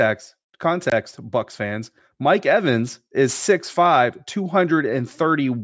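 Aliasing runs through the whole speech recording. The audio was brought down to a lower sample rate without an anti-alias filter first, so content above the 8 kHz fold point reflected back into the band as false, unrelated frequencies. This fits a conversion to 16 kHz. The folded energy sits roughly 25 dB below the signal, so sibilants sound gritty and metallic, and the spectrum stays full right up to the 8 kHz edge instead of rolling off.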